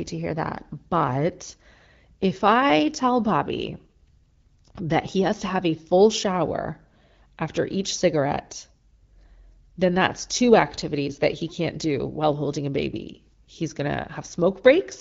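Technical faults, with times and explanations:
No technical faults found; the speech passes through an AMR wideband (HD Voice) codec at 12.65 kbit/s, whose coding leaves only a light trace on the sound.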